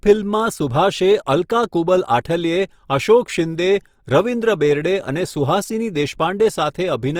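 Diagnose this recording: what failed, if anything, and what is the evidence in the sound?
Codec stage: throughout, the speech is grainy and rough, likely Opus compression; on a spectrogram, noise-filled bands rather than holes extend to 20.2 kHz, fitting roughly 24 kbps.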